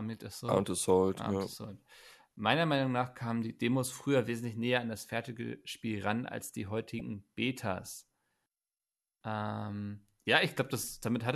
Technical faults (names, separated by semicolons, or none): damaged data in a compressed stream